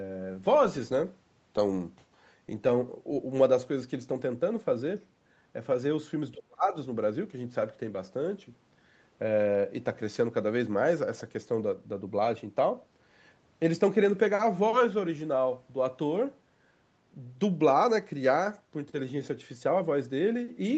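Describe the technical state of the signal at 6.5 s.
At 6.5 s the speech sits inside a suppressed span from 6.33 to 6.76 s, dropping by up to about 35 dB. This is likely speech suppressed in double talk: the echo canceller, confused by simultaneous far-end audio, attenuated the talker. On the waveform the envelope collapses abruptly, and the spectrogram shows a faded, near-empty gap.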